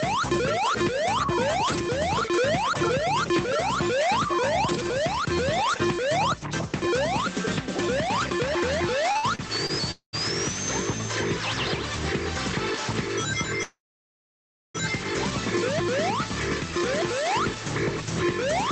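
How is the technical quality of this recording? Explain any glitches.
The recording has three kinds of fault: level pumping throughout, a burst of stutter, and two freezes. It came through a call link whose Opus coding fits a rate of about 20 kbps, and nothing is heard above 8 kHz.

Gain pumping runs through the whole clip. The level swings by about 5 dB. The likely cause is input gain set far too high, with a fast limiter pulling the level down on every peak. Loud and quiet passages end up squeezed together. On a waveform the envelope looks flattened.

Repeated stalls (stutter) occur from 9.11 to 9.71 s. In that stretch the audio catches four times, and about a quarter of the span is filled in, roughly 157 ms in total. The longest single hitch is 62 ms. Packets arrived late, so the playback buffer kept running dry, and the receiver stretched the last sound each time until fresh data came. 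Nothing is lost, but the passage drags and stammers. A spectrogram shows short smeared, repeated slices instead of clean transitions.

Call audio freezes occur at 9.91 to 10.15 s and at 13.63 to 14.76 s. Each is likely caused by packets held up in transit, which emptied the buffer. The first freeze lasts 218 ms, and about 120 ms of it is silence. The second lasts about 1.1 s, with roughly 1 s of silence. In both, the last sound continues briefly as a fading buzz or hiss, then drops out, and the audio resumes where it stopped. On a waveform each freeze is a decaying tail followed by a flat gap. A spectrogram shows a stretched, blurred band fading into an empty block.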